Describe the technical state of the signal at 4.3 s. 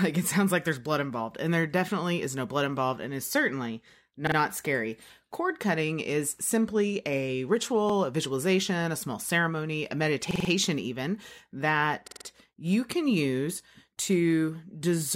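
A repeated buffer runs from 4.27 to 4.37 s, right after "involved and is certainly": a 46 ms block, consistent with a 2048-sample buffer, plays three times as a stutter, showing identical repeating waveform blocks with vertical discontinuities at each join.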